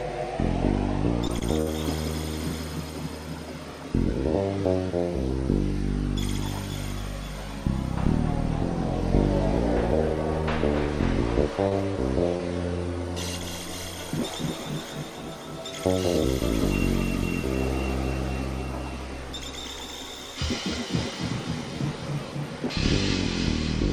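Short concealed packet loss at 1.27, 1.39, 11.69 and 12.37 s drops about 20 ms each, patched by extending the previous sound. Each shows as a brief smear, with a blurred vertical seam on the spectrogram.

A burst of packet loss from 1.61 to 1.71 s loses about 40 ms. The last sound is stretched and faded out, seen as a tapering waveform.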